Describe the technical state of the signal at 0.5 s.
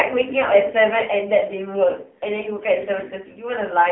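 At 0.5 s the speech carries AMR narrowband mobile codec damage, present throughout. It is band-limited to about 150 Hz–3.4 kHz, empty above 3.8 kHz. Heavy low-bitrate coding, consistent with 6.7 kbps, sounds buzzy and synthetic.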